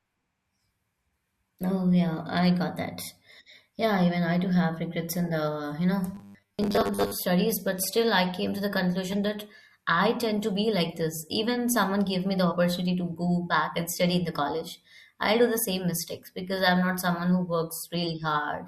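Right after "regrets in the you", from 6.15 to 7.15 s, the speech goes into robotic sound from repeated short buffers until "but still I came". The voice becomes a stiff, metallic buzz pinned at 100 Hz that still roughly tracks the syllables. That pitch means a 10 ms slice keeps getting replayed, with most of the second made of repeats. The likely cause is new audio reaching the player too slowly, so it loops the last buffer and skips the real material.

Then at 12.51 to 12.54 s there's a case of compressed frames skipped. The speech jumps ahead slightly. The gap sounds like roughly 40 ms of audio missing, which fits about two 20 ms frames never being decoded.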